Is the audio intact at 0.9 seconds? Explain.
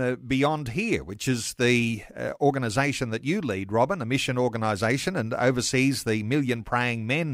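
Yes, the speech at 0.9 seconds plays through intact, with no fault to be heard at that moment.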